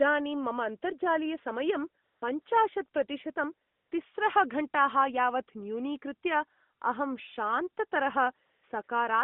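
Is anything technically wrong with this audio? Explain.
Yes. The speech has AMR comfort noise in its pauses. At 2.04 to 2.22 s, 2.42 to 2.46 s, 3.68 to 3.92 s, 8.46 to 8.64 s and 8.84 to 8.88 s, the real background gives way to a smooth, even hiss that cuts in and out. These stretches last 40 to 240 ms. During each, the phone judged the talker silent and stopped sending speech frames. The receiver filled the gap with synthetic noise built from a rough sketch of the background's level and spectral shape. The narrowband mobile codec carrying the speech confines it to roughly 150 Hz to 3.6 kHz with light coding damage, which fits AMR-NB at 12.2 kbps.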